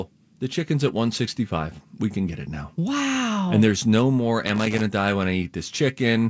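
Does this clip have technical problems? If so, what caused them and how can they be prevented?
Yes, there's a burst of loose connector crackle from 4.47 to 4.81 s: a worn or dirty contact kept making and breaking, chopping the speech into scratchy bits. Clean or replace that cable and connector.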